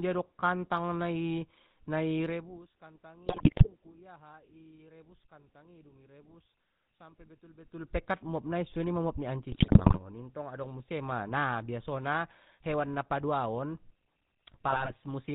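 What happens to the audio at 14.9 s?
At 14.9 s the audio is inside a burst of GSM bit errors running from about 14.68 to 14.93 s. Corrupted bits reach the speech decoder, and wrong filter, pitch and gain values rebuild each damaged frame with a bent spectrum and jumping level. The quarter-second span breaks into squawks, pops and gargling, a density of damage that fits roughly a dozen corrupted frames and an error rate of nearly 3 percent.

Under that burst, as through the whole clip, the speech has passed through the GSM full-rate codec. It models the vocal tract and drives it with a sparse, regularly spaced pulse excitation, which fits the 13 kbps full-rate scheme. Nothing survives above 4 kHz, so the speech sounds dull at the top, and the coarse excitation gives it a plainly audible buzzy, gravelly roughness.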